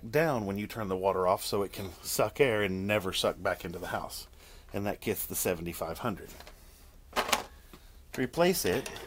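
No technical faults are audible.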